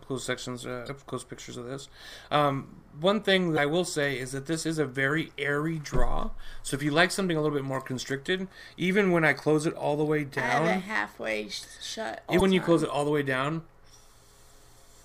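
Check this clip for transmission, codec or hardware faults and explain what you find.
The clip has one kind of fault, damaged data in a compressed stream, heard three times: 0.85 to 0.89 s, 3.54 to 3.59 s, and 12.37 to 12.42 s. Each lasts about 40 ms. Corrupted bytes in the encoded stream make the decoder misread those frames and lose sync until it finds the next valid frame header. The result is a short, harsh chirp or blip that breaks into the sound.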